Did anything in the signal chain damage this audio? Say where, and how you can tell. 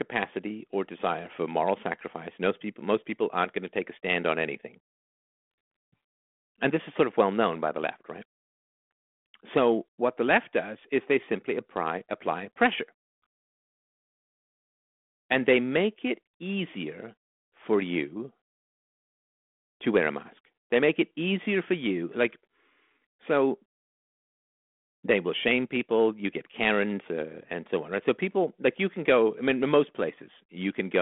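No, nothing in the signal chain damaged this audio.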